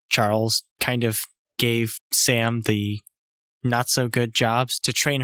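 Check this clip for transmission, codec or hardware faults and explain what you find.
I find no transmission, codec or hardware faults in this clip.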